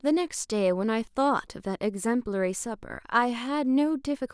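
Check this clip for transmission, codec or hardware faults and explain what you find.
No transmission, codec or hardware faults turn up in this clip.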